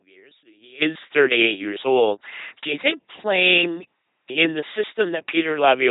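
Throughout this speech recording, an LPC-10 vocoder effect turns the voice into a buzzing, mechanical robot sound. Each moment is synthesized from either a pulse train or noise through a small all-pole filter, so voicing errors come out as buzz or hiss. The heavy damage and the absence of anything above 3.9 kHz fit a 2.4 kbit/s LPC-10 coder. From 0.0 to 0.8 s, the sound drops by about 24 dB and turns faint, most likely because one channel is inverted. With one channel's polarity flipped, the centred voice cancels when both channels are summed to mono, leaving only their small difference.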